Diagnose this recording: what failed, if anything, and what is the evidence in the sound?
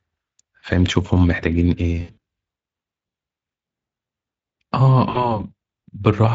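Network-stage failure: VoIP packet loss concealed by the speech codec. At 2.01 to 2.18 s, about 140 ms of audio is missing across a 160 ms stretch, the longest gap near 80 ms. The decoder fills it by repeating its last pitch and spectral shape at falling gain, giving a buzzy tone or coloured noise that fades. A shorter loss of about 60 ms affects 5.09 to 5.43 s, where the sound stays weak or distorted until the Speex decoder recovers.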